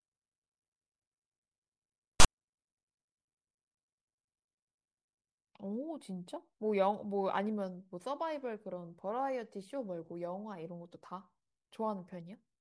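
At 2.2 s the speech is interrupted by file tags played as audio, lasting until about 2.26 s. A block of text metadata has been decoded as if it were sound samples. Text bytes make a loud, harsh rasp, pushed off to one side of the waveform. The zero padding in the block then plays as a short dead silence. The whole burst is under a tenth of a second, with abrupt edges on both sides.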